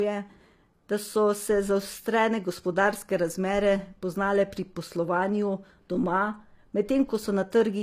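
Low-bitrate audio saved at a high bitrate runs throughout the speech: nothing sounds above 14.9 kHz, with a smeared, swirly coarseness in the upper range. This is likely a file first squeezed by a low-bitrate codec, then re-encoded at a high bitrate that cannot restore the lost detail.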